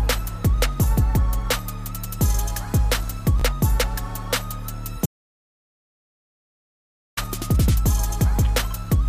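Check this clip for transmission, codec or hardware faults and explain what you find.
Two faults stand out: a brief reordering of audio chunks and a long dropout to silence.

Between 3.40 and 3.42 s there are chunks out of order. A short block of about 5.8 ms plays after the blocks that should follow it, which suggests it arrived or was written about three chunks late. Nothing is missing, but the sequence is scrambled, so the sound jumbles for an instant at three hard joins. On a waveform, the joins show as abrupt steps in the trace. On a spectrogram, they appear as thin vertical broadband lines.

From 5.06 to 7.17 s there is an audio dropout to silence lasting about 2.11 s. The sound cuts off mid-flow and returns just as abruptly. The gap contains no room tone, only silence, so whatever was playing then is lost. The likely cause is that the input was interrupted, for example by a disconnected device, a failed link or an accidental mute, while recording carried on. 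A waveform shows a flat line, and a spectrogram shows a fully blank band across all frequencies.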